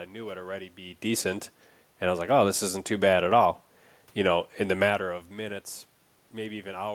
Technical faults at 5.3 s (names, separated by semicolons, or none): none